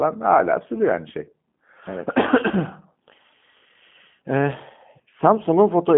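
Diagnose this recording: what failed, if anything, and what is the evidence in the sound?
Codec stage, throughout: the speech has that rough, slightly synthetic G.729 texture, squeezed into 150 Hz to 3.4 kHz with nothing above 3.7 kHz. That fits an 8 kbit/s pulse-based speech rebuild.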